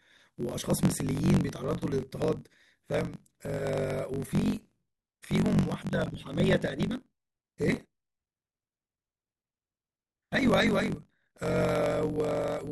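From start to end the speech carries a steady buzz at about 46.9 Hz, the signature of a block size mismatch (truncated). One stage hands over longer blocks than the next reads, and the tail of each block is dropped. The buzz rate fits a 1024-sample read. Because material is discarded, delivery runs 1.12 times fast while timbre stays, which separates it from a resampling error, where pitch would rise along with speed.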